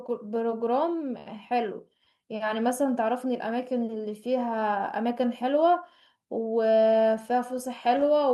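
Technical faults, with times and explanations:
throughout, clock drift between sender and receiver: the sender's clock runs about 3 percent slow, so the receiver's buffer keeps draining, causing small hiccups at uneven intervals.
0.03–8.29 s, repeated timing corrections: the receiver keeps repeating short pieces to fill the gap, adding roughly a fifth of a second, so speech runs at 98% speed.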